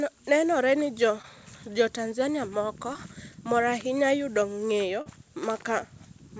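Short concealed packet loss hits three times: about 20 ms of the speech arrived too late at 1.22–1.25 s, again at 2.93–2.97 s just before "mor ahinya yudo", and 40 ms at 5.02–5.08 s. The decoder patched each gap by extending the preceding sound, so each spot is a brief smear or wobble, longest at 5.02 s.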